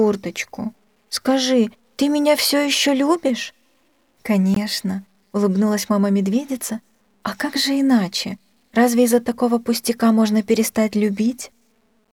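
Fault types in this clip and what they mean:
Low bit depth without dither: A grainy, gritty distortion runs through the whole clip and changes character with the sound. It is most obvious in quieter passages, where the roughness sits around 45 dB below the signal. The likely cause is a signal cut down to about 10 bits by simple truncation with no dither. The rounding error therefore tracks the waveform instead of settling into a steady, neutral hiss.
Gap at a join of encoded pieces: At 4.54 s the sound drops out for 19.7 ms. The silence has edges softened by codec smearing, and the sound then resumes exactly where it broke off. This happens where two separately encoded sections were butted together without trimming. The encoder's start-up delay and the padding in the final frame were both left in, and together they leave this short hole in otherwise continuous audio.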